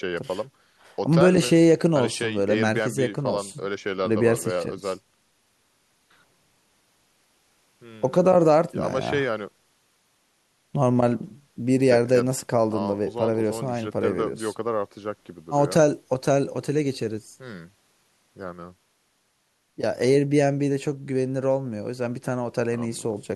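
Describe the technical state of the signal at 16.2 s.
Around 16.2 s the speech signal is intact, with no fault audible at that point.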